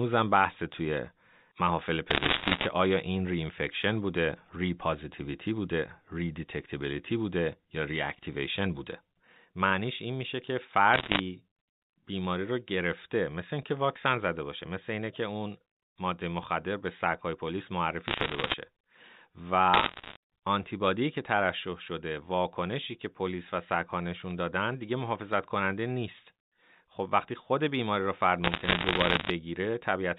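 Bits flipped on the digital phone line between 2.1 and 2.66 s, corrupting scattered samples at an error rate of roughly 3 percent. Errors that hit the sign or upper bits of the mu-law bytes produce a dense crackle of sharp ticks laid over the speech, which carries on unchanged underneath within its 4 kHz telephone band. At 8.92 s a lone bit error spike flips one sample by a power of two, and the value snaps straight back. It is heard as a single broadband click with no relation to the sound around it.

The bit errors on the line return from 10.94 to 11.2 s at roughly 2 percent, giving a shorter crackling patch. Another spike at 15.41 s, which fits two adjacent corrupted samples, gives one sharp tick. Crackle from line bit errors follows at 18.08–18.54 s and 19.74–20.16 s, both at a lower rate of around 1.5 percent, so the ticks are sparser. A single-sample spike clicks at 24.31 s. The last and longest burst of line bit errors runs from 28.44 to 29.3 s, again at about 1.5 percent, spreading thinner crackle across nearly a second.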